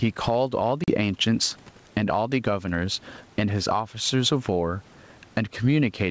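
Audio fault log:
throughout: gain pumping. The input gain is likely set far too high into a fast limiter, so the level swings around 15 dB, and everything sounds squashed.
0.84 to 0.92 s: packet loss on an ADPCM call. Roughly two packets went missing, leaving a hard-edged 40 ms hole. The decoder's predictor and step size then lose sync, so the speech returns slightly distorted before settling.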